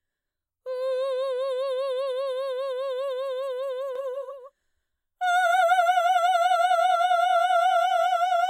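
From about 3.95 s to the end, the music picks up a doubled audio track: a second full-band copy trailing roughly 150 ms behind, a few dB quieter than the original. It cuts in abruptly, with no decay or room colour, so it reads as a hard slapback smear rather than any natural echo. Most likely the same signal got captured twice, once through a slower path, or an edit left two copies out of step.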